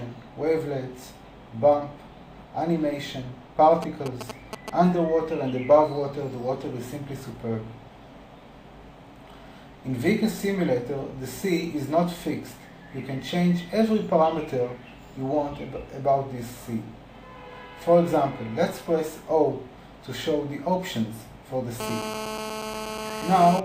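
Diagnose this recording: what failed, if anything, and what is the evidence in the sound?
GSM signalling bursts from 3.82 to 4.70 s, a galloping dit-dit-dit of short 217 Hz buzzes just under the signal level. A nearby phone's radio pulses are getting rectified in the analogue wiring.

GSM phone buzz from 21.80 to 23.60 s, a steady, raspy 217 Hz buzz about 7 dB below the signal. An in-call phone is transmitting in bursts 217 times a second, and the analogue circuit is demodulating it.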